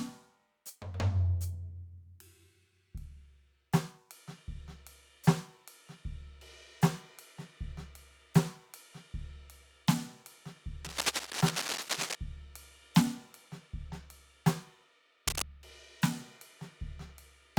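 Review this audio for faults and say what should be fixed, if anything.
Cable scratch noise at 10.84–12.15 s and 15.27–15.43 s: uneven scratching bursts about as loud as the music, likely from a worn cable or connector shifting. Replace suspect cables and secure connectors before recording.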